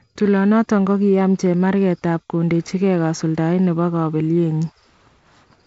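There are no technical faults to describe in this speech at any point in time.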